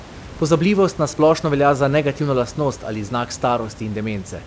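No technical faults are audible in this recording.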